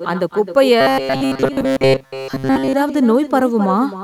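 From the start and running the full length of the speech, there is echo with no canceller: a quieter, thinner copy of every phrase trails the original by roughly 300 ms, sitting about 12 dB below it. The far end is playing the call through a loudspeaker, and its microphone is feeding that sound back across the network with nothing in the path to subtract it, so each utterance returns after the round trip.

From 0.81 s to 2.73 s the speech turns into a rigid, metallic buzz pitched at 134 Hz that still loosely tracks the syllables. This is robotic sound from repeated short buffers. The likely cause is audio arriving too infrequently, so the playback side keeps looping the last fragment of about 7.5 ms. That fragment length sets the fixed 134 Hz tone, while most of the real signal in that stretch is skipped rather than played.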